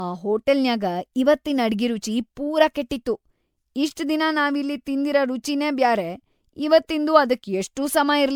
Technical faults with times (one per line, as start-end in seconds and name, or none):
0.00-8.35 generation loss